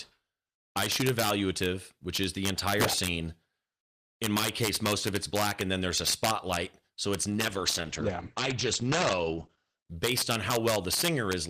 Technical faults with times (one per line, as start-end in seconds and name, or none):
0.00-11.50 integer overflow
7.31-9.87 call bitrate drop